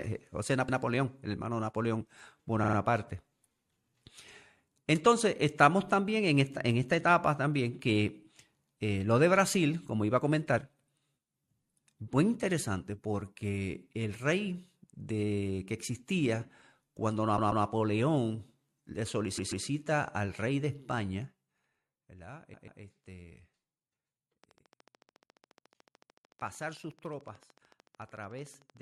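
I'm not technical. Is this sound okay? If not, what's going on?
No. The recording stutters at 0.68, 2.63, 17.37, 19.37, 22.53 and 25.17 s. These are repeated frames: a short stretch of audio, about 0.14 s, replays once or twice. At 2.63 s a tinier slice plays three extra times. The jumps fall just before "el hermano", after "de que existía cuando" and before "al rey de".

From 24.44 to 28.78 s there is a train of clicks: steady ticking about 14 times a second, around fifty in all, louder than the speech. It is likely caused by electrical interference.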